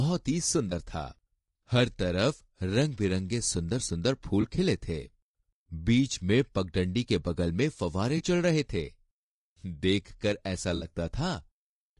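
Low-delay AAC compression runs throughout this speech clip. The voice sounds plainly rough and grainy, with noise between the harmonics and a thin, synthetic top band. This is likely the short frames of AAC-ELD smearing pitch detail, at a rate consistent with about 32 kbps.

AAC frame loss with concealment occurs at 0.69–0.72 s, 4.41–4.45 s, 8.17–8.23 s and 10.75–10.85 s. Each time the decoder patches the gap from the last good spectrum, leaving a brief smeared, phasey blur. The first three span about 20 ms of missing audio each, and the last about 60 ms, so it sounds longer.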